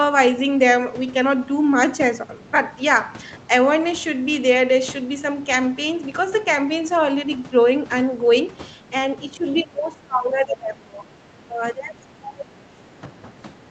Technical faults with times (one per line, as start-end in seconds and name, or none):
9.34-11.06 speech suppressed in double talk
9.57-9.62 other side's voice leaking through
11.36-12.45 speech suppressed in double talk
12.76-12.80 speech suppressed in double talk
13.58-13.66 speech suppressed in double talk